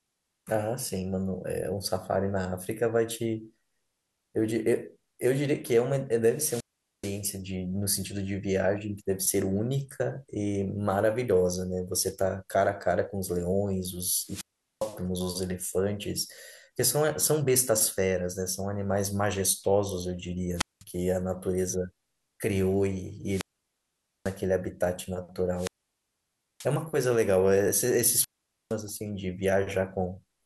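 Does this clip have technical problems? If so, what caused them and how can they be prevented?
Yes. Wireless microphone squelch dropout occurs at 6.29–7.29, 14.23–15.00, 20.56–20.84, 23.24–24.40, 25.53–26.71 and 28.15–28.77 s. Each time, static rises and the speech mutes for 0.2 to 0.9 s. The weak FM signal triggered the receiver's squelch. Keeping the transmitter in line of sight and fitting diversity antennas prevents this.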